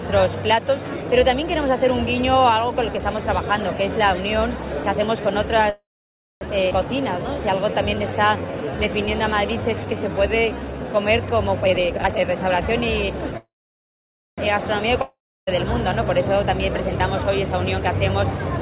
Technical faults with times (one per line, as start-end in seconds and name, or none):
5.70-6.43 call audio freeze
6.69-6.73 skip ahead
7.01-10.84 jitter buffer slow-down
11.61-13.32 jitter buffer speed-up
13.37-14.40 call audio freeze
15.02-15.49 long network dropout
16.46-18.59 jitter buffer speed-up